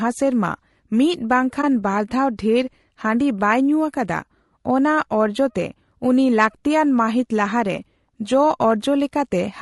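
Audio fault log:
throughout: low-delay AAC compression, plainly audible as a rough, grainy speech quality with noise filling the gaps between pitch harmonics. The likely cause is an AAC-ELD encode at a bitrate around 32 kbps: its short, low-delay frames resolve harmonics poorly and starve the spectrum of bits.
1.61–1.64 s: AAC frame loss with muting, heard as a brief dip in the speech. About 20 ms of signal, which fits a single lost frame, was zeroed by the decoder, and the overlapping windows fade the sound out and back in rather than cutting it abruptly.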